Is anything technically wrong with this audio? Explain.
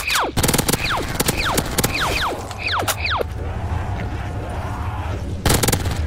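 Yes. From 0.10 to 2.17 s and again from 5.46 to 5.87 s, loud passages turn into a harsh, gritty fuzz from hard clipping. The signal is driven about 14 dB and then about 13 dB past what the stage can pass, so peaks are sliced flat, adding bright high harmonics.

Brief chirps and blips at 0.37 s, from 3.18 to 3.22 s, and at 5.62 s come from damaged data in a compressed stream. Corrupted bytes make the decoder misread frames and hunt for the next valid header, briefly garbling the sound.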